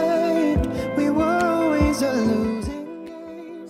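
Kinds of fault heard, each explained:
Nothing stood out on listening to this clip.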